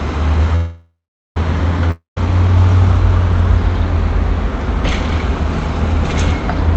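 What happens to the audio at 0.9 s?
A call audio freeze spans 0.55 to 1.37 s: the last sound is stretched into a fading buzz, then 0.4 s of silence, likely from a starved jitter buffer; playback resumes intact, delayed about 0.8 s.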